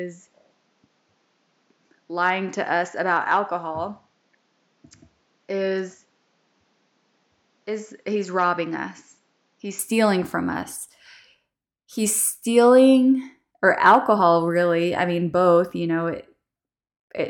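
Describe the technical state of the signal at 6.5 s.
An input switched to a poorer device covers 0.0 to 9.79 s. The band stops at 7.6 kHz, the level sits about 5 dB lower, and a faint new noise floor appears, likely from another microphone, until the fuller sound returns cleanly before "stealing from us".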